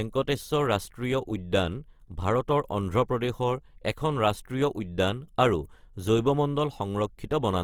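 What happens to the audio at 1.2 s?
At 1.2 s you're hearing the same thing that runs through the whole clip: Opus compression is the likely culprit. The speech has that rough, grainy texture where the encoder, short on bits, has kept each band's energy but filled in the detail with folded copies of lower bands or noise. There's no real muffling since the band still reaches about 20.2 kHz, and the damage is plainly audible, which fits a low rate around 24 kbps in the music-style mode.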